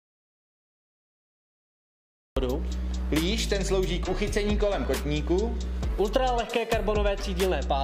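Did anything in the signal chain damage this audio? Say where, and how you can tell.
Yes. The audio opens in an audio dropout to silence that is already under way and lasts until 2.37 s: silence with no room tone, then sound arrives abruptly mid-flow. Unlike a noise gate or quiet passage, nothing breathes underneath; the likely cause is a lost input link or device while recording continued.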